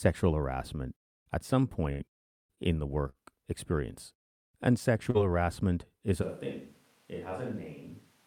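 A speech recording with network faults and a microphone change. At 1.91 to 2.02 s, after "harassment at some", there is a burst of packet loss. The receiver holds the last sound for about 80 ms, fading it out. About 40 ms of speech is gone before "in the" resumes. Three short stalls from late packets follow, at 2.15 to 2.21 s, 2.55 to 2.60 s and 3.09 to 3.17 s, the last just after "in the". Each time the jitter buffer runs dry. The last sound is stretched by 30, 21 and 45 ms, then continues where it stopped. Little or nothing is lost, but the sound drags briefly. At 5.10 to 5.17 s a short concealed packet loss leaves a brief smear. About 40 ms never arrived and was filled with an extrapolation of the preceding sound. From 6.23 s, after "harassment is", to the end, the sound turns abruptly hollow and roomy. It drops about 10 dB, and background noise sits only about 25 dB below the speech. 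This is likely a switch to a distant microphone.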